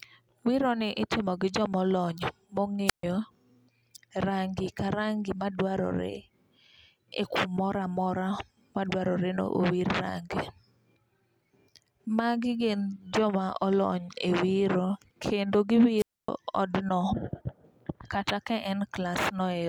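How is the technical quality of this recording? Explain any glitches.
Two brief wireless microphone squelch dropouts interrupt the speech. At 2.86 to 3.03 s, then after "wiro kendo" at 15.97 to 16.29 s, the radio link fades, the receiver's squelch shuts, and you get a hiss-edged gap of near silence lasting about 137 ms and 265 ms respectively.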